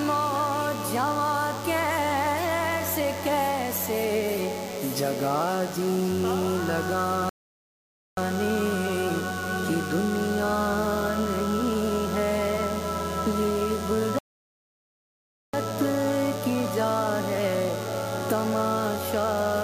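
A nearby DECT cordless phone or base station is sending radio bursts every 10 ms, and the audio circuitry rectifies them into DECT phone buzz. The result is a thin, steady buzz at 100 Hz with many harmonics, roughly 15 dB below the programme, present from start to finish.

At 7.29 s the player runs out of downloaded audio and halts in a rebuffering stall. The sound drops to silence until 8.17 s, then picks up exactly where it stopped, adding 0.88 s. A second stall from 14.19 s to 15.54 s does the same, adding 1.35 s, with nothing missing on resumption.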